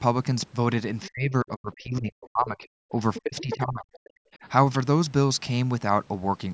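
At 1.02 to 1.1 s a faint second voice breaks in, about 20 dB under the talker. This is the other side's voice leaking through, likely because the far end's loudspeaker output reached the microphone and the echo canceller left a residue. Right after, from 1.09 to 2.94 s, the talker's speech sinks and drops out in pieces for about a second and a half in total, at its deepest about 40 dB down. That is speech suppressed in double talk: with both sides talking at once, the canceller likely could not tell its own talker from the echo and turned everything down.

The pattern repeats. The leaking voice returns louder, about 10 dB below the talker, from 3.14 to 3.62 s. Overlapping it, the talker is pushed down again from 3.22 to 4.05 s, by about 40 dB, for roughly 0.7 s in total. A much weaker echo scrap, about 30 dB down, follows from 3.93 to 4.09 s. Last comes a brief shallow dip of about 5 dB from 4.42 to 4.46 s. 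Throughout, nothing sounds above 8 kHz, and the call's microphone high-pass thins the lowest bass as expected.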